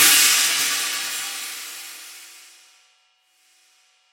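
No audible technical faults.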